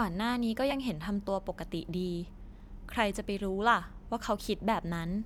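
A corrupt frame was decoded twice: flipped bits in a single compressed frame were played anyway, scattering energy to wrong frequencies. At 0.70 to 0.73 s this gives a fairly loud chirp-like blip; at 2.91 s, a much fainter, shorter one.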